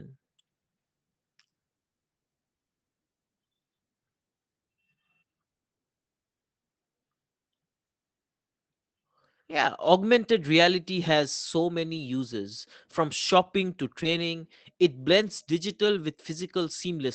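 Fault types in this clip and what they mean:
Lost packet rebuilt from error correction: packets were lost in transit, and the decoder played the low-bitrate copies carried in the next packets, so no gap opens. Short stretches turn rougher and noisier: 20 ms at 10.75 s before "has so", 60 ms at 11.93 to 12.03 s after "has so", and 20 ms at 14.05 s.
Short concealed packet loss: about 20 ms of audio reached the decoder too late. The receiver extended the preceding sound for roughly 11 ms, then blended back into the real signal. At 14.03 to 14.07 s, just after "from shopping to", this leaves a brief smear.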